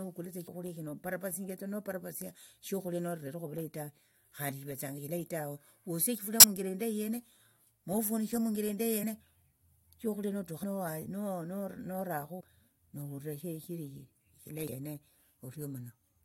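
Compressed frames are skipped at 0.47 s, 3.24–3.27 s (just before "ovulayi ta"), 9.02 s, 10.62 s, 12.39–12.41 s and 14.68 s. Whole frames drop out, so the speech jumps ahead by roughly 20 to 150 ms.

A corrupt frame is decoded at 6.40–6.44 s, after "eshilayi tawe wosie eshifulia". A few damaged frames place energy at wrong frequencies, giving an error peaking near about -10 dBFS.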